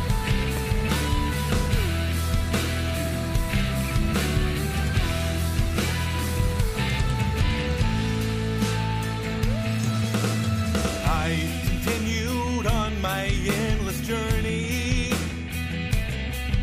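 At 0.57 s and again at 10.94 s, there is a repeated buffer. New audio arrived late, so the last short block played a second time. Each repeat fits a 10 ms buffer. The hard joins make a brief click or buzz, with almost no sound missing.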